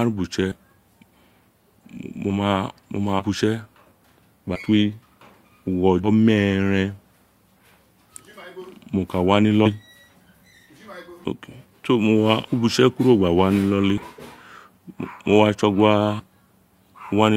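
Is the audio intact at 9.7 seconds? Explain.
No. From 9.65 to 9.70 s the speech jumps forward because compressed frames were skipped: whole 20 ms frames were never decoded, roughly 150 ms of audio in all.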